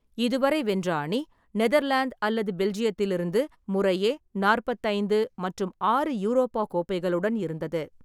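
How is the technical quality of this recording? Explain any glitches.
Nothing in the recording trips me up, and there isn't a single glitch in it to explain.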